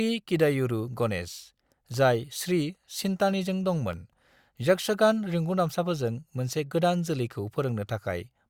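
A speech recording with periodic USB or driver dropouts between 0.94 s and 4.94 s, ending just before "रिंगुदामसाफोरजों मोनसे". About five tiny ticks fall once per second, each a gap of roughly half a millisecond filled with silence, where a background task briefly blocked the audio bus or driver.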